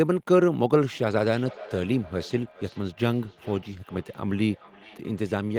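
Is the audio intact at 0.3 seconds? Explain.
Yes, at 0.3 seconds the speech plays through cleanly, with no dropout, click, distortion or other fault at that point.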